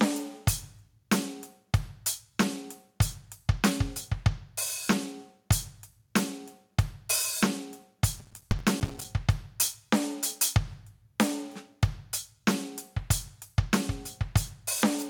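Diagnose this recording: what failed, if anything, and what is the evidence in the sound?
Gain pumping runs throughout the music. The gain ducks by roughly 10 dB under each loud passage and swells back in the gaps, leaving the dynamics squashed. This sits in the level-processing stage; the likely cause is input gain set far too high, with a fast limiter clamping every peak.

Processor overload crackle runs from 8.20 to 9.05 s as a dense, gritty tearing built from many tiny dropouts to silence, and it stops abruptly. This is a driver or buffer failure: the processor missed a few dozen deadlines on buffers of about 5 ms, each miss leaving a hard-edged hole.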